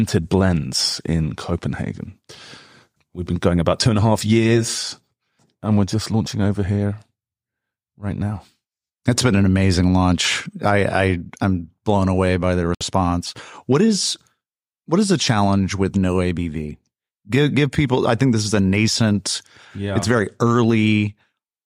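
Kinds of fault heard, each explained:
Bluetooth stall: Right after "blown away by the", around 12.75 s, the speech just drops out to dead silence for about 61 ms and then carries on at 12.81 s. That's the sound of the headphones running out of buffered audio, likely because wireless interference held packets back and playback had to wait for them to be resent. It's a clean gap rather than a crackle or a smear, which is what gives it away.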